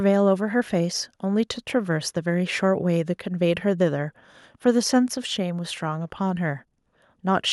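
No technical faults are audible anywhere in this speech recording.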